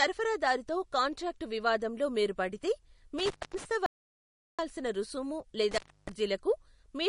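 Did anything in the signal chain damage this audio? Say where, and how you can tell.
Yes. At the codec stage, the whole clip has watery, swirling speech with nothing above 10.6 kHz. That is likely MP3 compression, and it fits a low bitrate of around 40 kbps.

In the analogue wiring, intermittent contact opens the line at 3.19–3.65 s for 0.23 s and at 5.71–6.09 s for 0.30 s. Each gap has crackle at its edges and faint hiss while the line is open.

An audio dropout to silence runs from 3.86 to 4.59 s. For 0.72 s there is silence with no room tone, most likely because the input was lost while the recorder kept writing silence.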